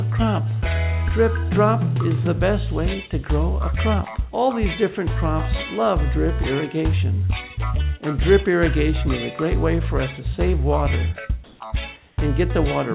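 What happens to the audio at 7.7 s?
Nothing goes wrong at 7.7 s: the audio carries on intact through that moment, still band-limited to about 4 kHz by the narrowband call path it passed through.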